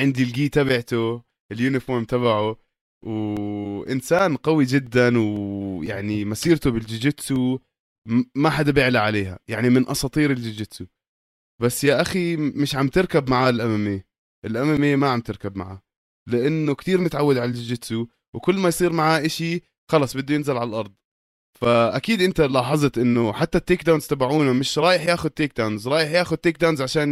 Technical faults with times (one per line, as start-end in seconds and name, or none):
3.37-7.86 periodic USB or driver dropouts